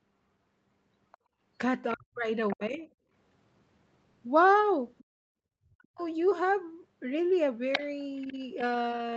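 A speech recording from a call in which the echo canceller repeatedly fails to handle the loudspeaker signal. Other side's voice leaking through, likely from incomplete echo cancellation, is audible from 1.12 to 2.56 s at about 20 dB below the talker, from 4.98 to 6.02 s at about 30 dB below, and from 7.72 to 8.33 s nearly as loud as the talker, as a second voice under the main one. Background gated by the echo canceller occurs where the canceller clamps the microphone while the far end plays: the room sound dips by about 14 dB for roughly a fifth of a second from 1.18 to 1.39 s, then by about 38 dB for roughly a third of a second from 5.04 to 5.33 s. Speech suppressed in double talk follows when both sides talk at once and the canceller likely mistakes the talker for echo. Between 1.93 and 2.87 s and between 5.61 and 6.01 s the talker's voice drops by up to about 40 dB, and from 7.79 to 8.61 s it only dips slightly, by about 5 dB.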